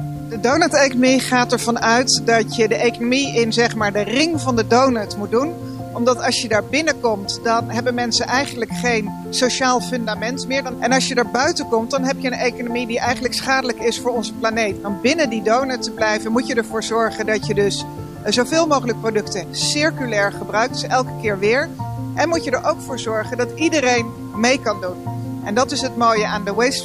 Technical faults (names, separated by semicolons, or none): low bit depth without dither